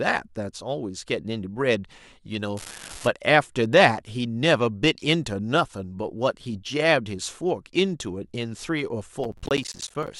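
From 2.57 to 3.07 s an unreliable data bit adds a steady fizz. One marginal data line flips its bit in a random share of samples, so every error is a spike of identical size. Because the spikes ignore the speech level and keep going through pauses, this is not overload crackle.

From 9.24 to 10.08 s processor overload crackle breaks up the speech. The processor misses many buffer deadlines in a row, and each miss drops a short hole of silence with hard edges. The gaps fit buffers of about 10 ms and point to around thirty misses. Unlike the bit fault, this is a gritty tearing made of gaps that rides on the speech and stops once the load clears.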